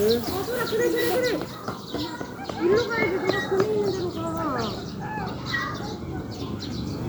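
No technical faults can be heard in this recording of sounds.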